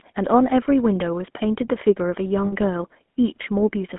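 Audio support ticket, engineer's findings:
Buzzy, gravelly roughness throughout, band limited to roughly 200 Hz–3.4 kHz. GSM full-rate codec, which fits 13 kbps; pulse-excited vocal tract model coarsens the excitation.

Rough metallic hold 2.46–2.54 s, 60 ms. Lost GSM frames, consistent with three 20 ms frames; concealment repeats the last good frame.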